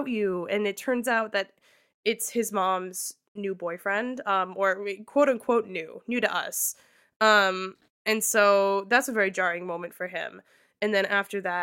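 No technical faults can be heard anywhere in the recording; the speech signal stays steady and intact throughout.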